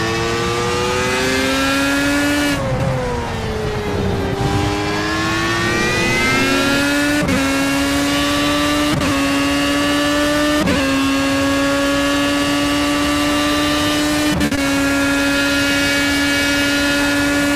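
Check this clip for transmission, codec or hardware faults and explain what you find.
Two network faults sit back to back just after 14.4 s. From 14.45 to 14.53 s there is a short stall from a late packet: the jitter buffer emptied, so the last sound is held for about 60 ms with a faint buzz or dip, then resumes with nothing skipped. Unlike a loss, the audio is delayed rather than cut. From 14.55 to 14.59 s comes short concealed packet loss: 20 ms never arrived, and the decoder patched the gap by extending the preceding sound. It is heard as a brief smear or wobble, and this time the original content is genuinely missing.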